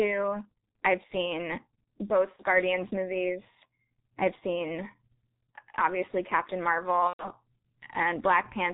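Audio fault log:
throughout: G.723.1 codec. The speech is squeezed through a 6.3 kbit/s coder working in 30 ms frames. Nothing above 4 kHz survives. The vocal model updates slowly. So the voice sounds muffled and hoarse, and consonants smear together.
2.36–2.43 s and 7.07–7.31 s: VoIP packet loss concealed by the speech codec. Audio went missing, about 30 ms at the first point and about 120 ms at the second, which fits one and then four lost packets. The decoder filled each gap by repeating its last pitch and filter at falling gain. That turns the sound into a fading buzzy tone or coloured noise, and the voice stays weak briefly afterwards.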